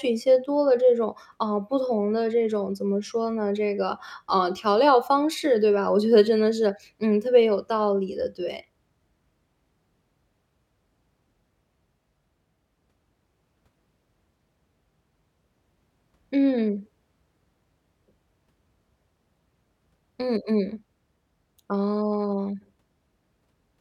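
No technical faults can be heard anywhere in this speech recording.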